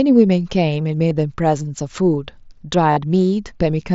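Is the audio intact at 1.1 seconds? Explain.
No. Concealed Bluetooth headset packet loss hits at 1.10 s. About 15 ms of audio went missing between headset and phone, which fits two lost frames. The receiver filled the gap by repeating the best-matching recent stretch of waveform, leaving a brief buzzy blip.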